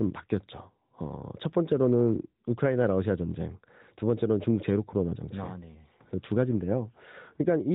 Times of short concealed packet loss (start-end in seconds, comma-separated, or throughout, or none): none